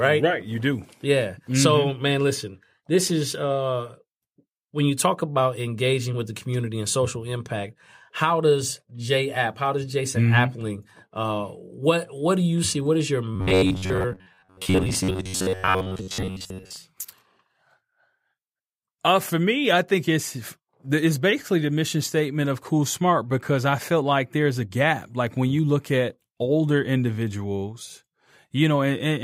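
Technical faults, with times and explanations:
13.36–16.77 s, robotic sound from repeated short buffers: right after "is your", the speech collapses into a rigid metallic buzz at about 93.8 Hz that only loosely tracks the words. The likely cause is audio arriving too slowly, so playback keeps looping the most recent fragment, roughly 10.7 ms long to match that buzz, while fresh audio is dropped. Around two-thirds or more of this stretch is repeated material.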